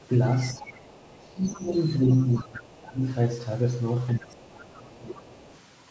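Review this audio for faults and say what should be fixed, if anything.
Other side's voice leaking through at 0.00–0.07, 0.61–0.67, 1.31–1.54, 2.10–2.62, 4.35–4.50 and 4.85–5.59 s: faint fragments of a second voice sit beneath the talker, roughly 20 to 30 dB down, loudest in the second, third and fourth stretches. The likely cause is the talker's device playing the far end through a loudspeaker, with the microphone picking it up and the echo canceller leaving a residue.

Speech suppressed in double talk from 0.54 to 3.02 s and from 4.14 to 5.45 s: the talker's level sags, dropping by as much as about 20 dB, over roughly two seconds in the first span and one and a half in the second. Both spans overlap the leaked fragments, pointing to the likely cause: the echo canceller, unable to separate the local talker from the loudspeaker echo while both were active, pulled down the whole signal.

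To prevent both, the talker should use a headset instead of a loudspeaker so no far-end sound reaches the microphone.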